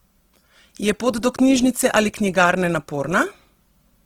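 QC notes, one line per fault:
throughout, Opus compression: the speech is plainly rough and grainy across the full bandwidth, with noisy fizz filling the upper bands instead of the swirling, hollow gaps MP3 leaves, which points to the music-mode encoder, likely starved at a low bitrate near 16 kbps.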